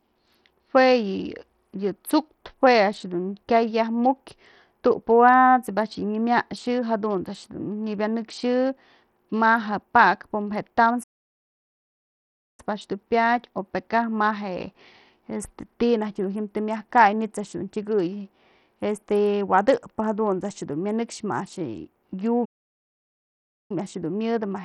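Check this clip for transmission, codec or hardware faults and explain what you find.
Two kinds of fault are present. Throughout, the speech sounds gritty and coarse, with treble thinning and nothing above 16.4 kHz, likely from heavy Bluetooth SBC compression that starves the upper sub-bands, which fits a low bitrate of around 64 kbps. At 11.03 to 12.60 s and again at 22.45 to 23.71 s, the sound cuts to silence for about 1.6 s and 1.2 s, then resumes, a playback stall where the output was likely starved of data.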